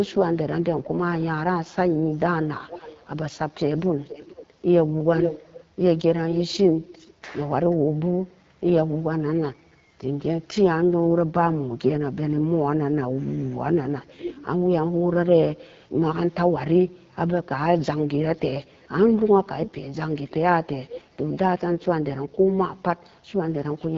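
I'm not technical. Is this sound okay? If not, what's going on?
No. Throughout, the speech passes through the AMR wideband (HD Voice) codec at a low setting, which makes it rough and raspy, with nothing above 7.5 kHz.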